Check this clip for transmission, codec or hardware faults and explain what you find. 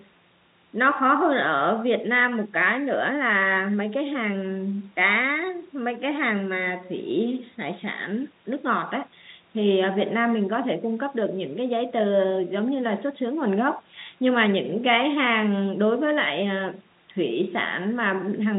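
No transmission, codec or hardware faults turn up in this clip.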